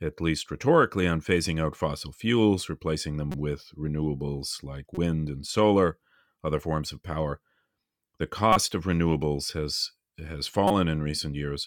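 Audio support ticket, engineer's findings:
Corrupt frame decoded, four hits, short chirpy bursts, each about 30 ms:
3.32–3.35 s, between "out fossil fuels replacing" and "with renewables like". Roughly two frames hit, quiet blip around -20 dBFS.
4.95–4.98 s, before "and solar other forms". One frame, similar level.
8.53–8.56 s, just before "of renewables". One frame, loud, near -5 dBFS.
10.68–10.71 s, one frame, also loud.
Decoder side: flipped bits in the payload, frames played anyway, so misread gains and codes dump energy at the wrong frequencies for a frame's length.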